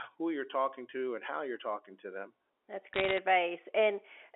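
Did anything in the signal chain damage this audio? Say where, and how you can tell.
Yes. Bit errors on a digital phone line, in transmission, damage the speech from 2.94 to 3.18 s. Sharp ticks crackle over telephone-band sound that is otherwise unchanged. Each flipped bit corrupts one G.711 sample. Sign or high-bit hits give the loudest clicks. The error rate is about 0.7 percent.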